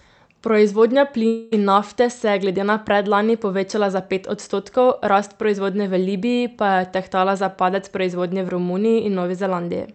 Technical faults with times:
1.27-1.53 long network dropout

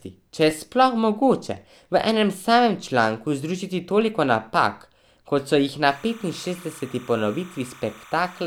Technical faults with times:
0.51 repeated buffer
5.86-8.46 timecode bleed
6.56 repeated buffer

